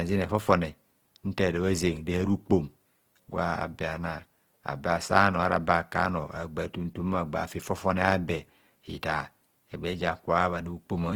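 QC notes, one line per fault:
Throughout, Opus compression. The speech sounds rough and grainy, with a noisy texture. Full bandwidth survives, reaching 20.2 kHz. The likely cause is Opus music mode filling starved bands with noise or folded copies. The damage fits a bitrate near 16 kbps.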